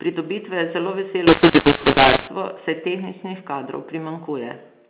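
From 1.27 to 2.27 s, between "je zelo" and "saj tehničnih kadrov", a mu-law and A-law mix-up: A-law telephone samples decoded as mu-law scramble levels, making speech harsh and filling pauses with hiss, unlike plain clipping.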